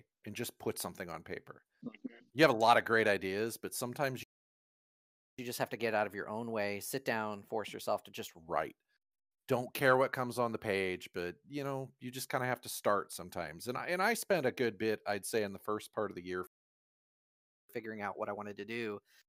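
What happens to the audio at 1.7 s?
Nothing goes wrong at 1.7 s; the speech there is intact, with no dropout, click, distortion or other fault.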